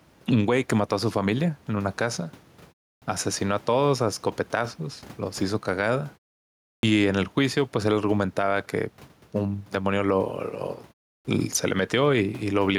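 A speech recording with gain pumping throughout: the level swings by about 5 dB as a fast limiter or compressor, likely reacting to gain set far too high for the microphone, clamps down on each loud syllable. The room noise sits about 32 dB below the speech. Clipped starts after a pause occur at 2.97 s, 6.79 s and 11.2 s, where roughly 48, 41 and 48 ms of the opening sound is swallowed following pauses of 0.32, 0.69 and 0.35 s. The output device drops into a sleep state during silence and needs that time to wake and lock again, so the waveform jumps from a flat line straight into speech, and the spectrogram shows a hard vertical edge with the initial sound energy missing.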